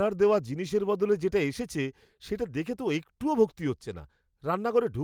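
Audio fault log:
No faults detected anywhere in this speech recording.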